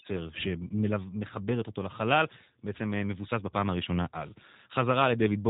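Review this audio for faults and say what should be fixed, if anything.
G.729 codec damage runs throughout the speech. It is band-limited to 4 kHz with a rough, synthetic buzz, consistent with an 8 kbit/s codec rebuilding each 10 ms frame from a pitch predictor and a few pulses. A plain low-pass filter would sound dull but smooth, not gritty. Capture or archive the recording before it passes through a narrowband VoIP codec, or route the call through a wideband codec.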